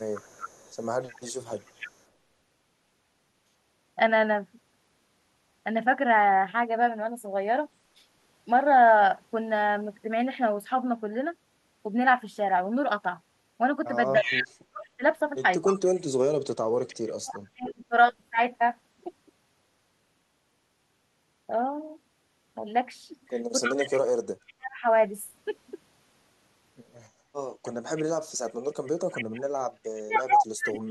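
From 0.0 to 2.03 s there is an echo leak: a faint copy of the speech trails it by 300 ms, far below the direct sound. The likely cause is a far-end echo canceller failing to remove its loudspeaker pickup. On a spectrogram, the harmonic patterns repeat, shifted 300 ms later and much dimmer. The leak returns much louder, close to the level of the speech itself, from 14.18 to 17.7 s and from 23.61 to 24.53 s, where the waveform shows overlapping, smeared envelopes. A faint copy appears again from 27.65 to 28.51 s.

Speech suppressed in double talk coincides with the loud leaks, at 14.18 to 17.92 s and 23.76 to 24.84 s, and appears again from 28.8 s to the end. With both sides active, the canceller likely could not tell its own talker from the echo and turned everything down. The talker's voice ducks in chunks by as much as 35 to 40 dB, about a second or two per stretch. On the waveform, the amplitude collapses abruptly in those spans. 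On a spectrogram, the energy thins out, with the upper bands vanishing.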